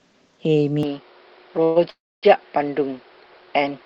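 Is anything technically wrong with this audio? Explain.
Yes. From 0.83 s to the end the sound turns duller and boxier, with nothing above 5.4 kHz and a faint new background noise about 30 dB under the signal. The level stays the same and there is no gap at the change. This is likely an input switched to a poorer device, a narrower-band microphone or headset path.

There are two call audio freezes, at 1.63–1.78 s and 1.90–2.38 s. In each, the last sound is stretched into a fading buzz, and the second one drops to about 250 ms of silence before resuming. Nothing is lost; the stream resumes later, adding about 123 ms and 330 ms of delay. This points to delayed packets emptying the jitter buffer.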